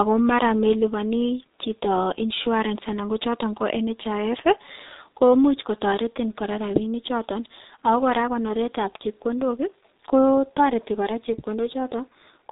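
Speech runs through the G.723.1 codec for its whole length, and the damage is heavy. Nothing reaches above 3.8 kHz, so the sound is muffled, and the slow 30 ms frame updates leave it hoarse, with smeared consonants. The coarse texture points to a bitrate near 6.3 kbit/s. A plain low-pass filter would only dull the sound without adding roughness. A faster-updating narrowband codec would keep consonants crisper.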